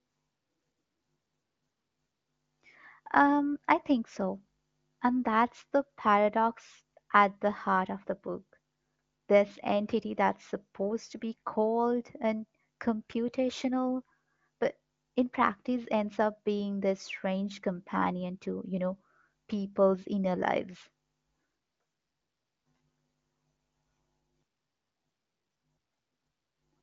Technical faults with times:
none

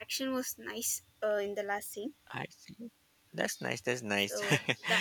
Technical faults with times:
none

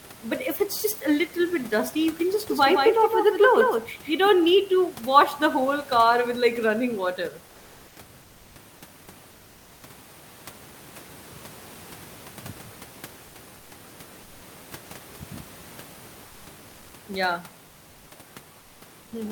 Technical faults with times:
2.49-4.27 doubled audio track
13.27-13.35 comfort noise in place of the background
16.27-16.45 comfort noise in place of the background
18.59-19.11 comfort noise in place of the background

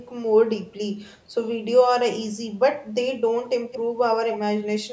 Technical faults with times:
3.71-3.81 echo leak

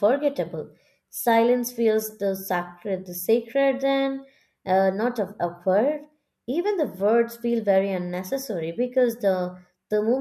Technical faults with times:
none

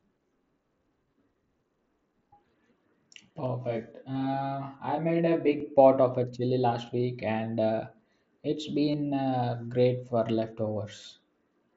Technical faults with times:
3.46-5.60 channel delay (comb filtering)
4.15 concealed Bluetooth headset packet loss
8.91-8.94 concealed Bluetooth headset packet loss

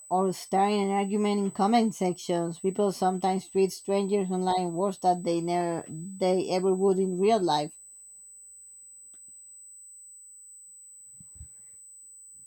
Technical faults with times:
0.00-12.47 USB whine

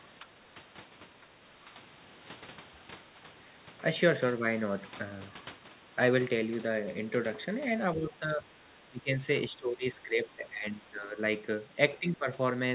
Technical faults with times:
0.19-0.60 speech suppressed in double talk
1.22-1.28 speech suppressed in double talk
7.96-9.22 speech suppressed in double talk
9.49-11.17 speech suppressed in double talk
12.00-12.27 speech suppressed in double talk

